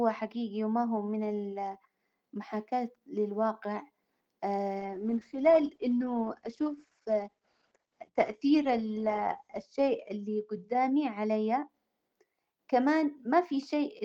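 Around 4.8 s the speech loses its top end and turns rough and watery. That's a call bitrate drop: the bandwidth estimate fell, so the encoder went from 32 kbps down to 11 kbps. It codes the signal much more coarsely and trims the audio band from 20 kHz to 8 kHz, which is where the muffling comes from. The worst of it lasts about 4.9 s, and full quality is back by 11.75 s.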